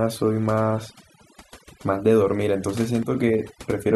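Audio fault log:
Throughout: overdone noise removal. A noise reduction process was pushed far too hard on this speech. Any frequency band that sits close to its noise estimate is cut deeply or switched off. The quieter parts of the speech fall below that line and vanish with the noise. Between phrases the background drops and breaks up into twinkling, warbling specks. The speech itself has its softer detail stripped away.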